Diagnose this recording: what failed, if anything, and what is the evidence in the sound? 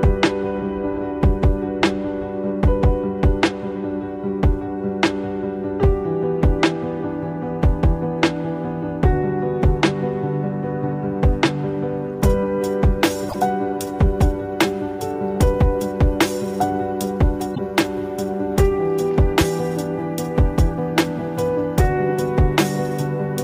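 Damaged data in a compressed stream, at the codec stage: the decoder hits corrupted frames, misreads them and loses sync until it finds the next valid frame header. Each event is a brief chirp, squawk, click or short hole, from 13.26 to 13.35 s and from 17.52 to 17.59 s.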